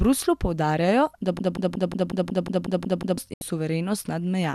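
At 1.39 s the playback chain likely stalled and kept re-sending the last fragment it held, producing a broken-record loop. A piece of speech about 182 ms long repeats exactly, back to back, ten times, until 3.18 s. It sounds like a rapid, mechanical stutter with a fixed rhythm, and the speech that should have filled those 1.8 seconds never arrives.

Shortly after, at 3.34 s, a digital broadcast dropout occurs. The receiver stopped getting valid frames and muted its output until good data returned at 3.42 s. The sound fades out over about 3 ms, almost a hard cut, and leaves a silent hole of about 72 ms, which fits three lost frames. Whatever was sent during that gap is simply missing when the speech resumes.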